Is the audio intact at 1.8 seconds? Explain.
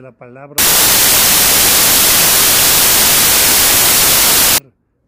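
No. At 1.8 seconds the audio sits inside a stretch of samples built from the wrong bytes, running from 0.58 to 4.58 s. The reader is assembling each sample's bytes incorrectly, misaligned by a byte or in swapped order, so the rapidly fluctuating low-order bits end up as the dominant part of every value. The result at that moment is loud, harsh broadband noise in place of the original sound.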